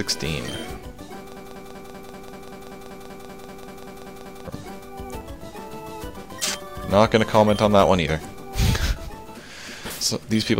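From 1.37 s to 4.47 s the sound locks into a broken-record loop. A fragment of about 0.19 s plays, then plays again, exactly the same, back to back. It repeats 16 times. The result is a rapid, mechanical stutter lasting about three seconds. The audio that belonged in that span never arrives; playback resumes at 4.47 s with that stretch gone. The likely cause is a stalled player, encoder or stream resending its last held fragment.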